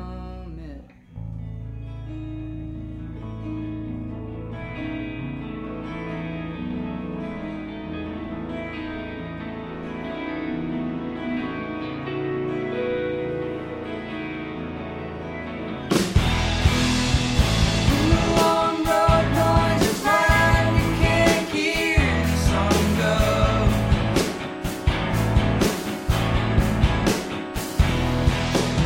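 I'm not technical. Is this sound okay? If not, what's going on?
No. USB whine appears from 23.09 s to the end at 28.85 s: a faint, steady high-pitched tone at 8 kHz. The USB connection draws power in rapid regular pulses, and that electrical rhythm leaks into the recording as a constant squeal.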